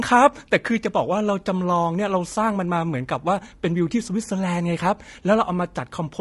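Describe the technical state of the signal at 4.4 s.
At 4.4 s the speech sounds rough and grainy, with a hiss-like fill between the harmonics and a thin, synthetic top end. That's the same damage heard across the whole clip, and it's plainly audible. The likely cause is low-delay AAC compression, the AAC-ELD kind used in video calls. Its very short frames can't separate pitch harmonics cleanly, so at a low rate, roughly what you'd expect around 32 kbps, the voice texture breaks up.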